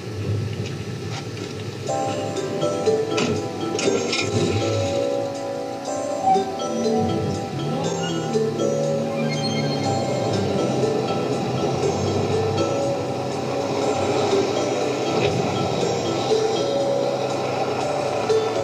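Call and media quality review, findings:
No faults found on review; no action required.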